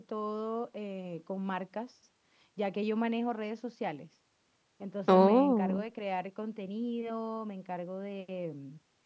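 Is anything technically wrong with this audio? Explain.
No, nothing is technically wrong.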